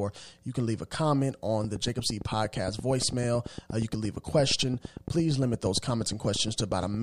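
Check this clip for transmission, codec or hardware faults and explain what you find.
One hardware-type fault is present: a train of clicks running from 1.64 s to 6.95 s. The likely cause is a repeating electrical pulse leaking into the signal chain, such as interference from nearby equipment or a faulty connection or power supply. It adds about fifty near-identical clicks at a steady 8.7 per second, peaking around 10 dB above the speech. The result is a regular ticking laid over the talking that carries on through the pauses.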